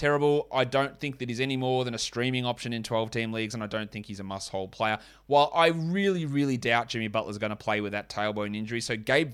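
No technical faults are audible.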